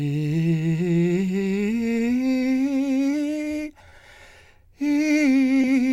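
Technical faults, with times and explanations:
Throughout: clock drift between sender and receiver. The sender's clock runs about one and a half percent slow, so the receiver keeps running short of material and the music's timing wobbles.
0.60–3.12 s: repeated timing corrections. The receiver stretches the music by inserting short repeats, about 40 ms in all, which makes the tempo drag slightly and a bit unevenly.
3.90–3.94 s and 5.62–5.66 s: short stall from a late packet. The buffer ran dry twice, so the last sound gets held for 20 ms each time, a tiny sticky hiccup with nothing actually lost.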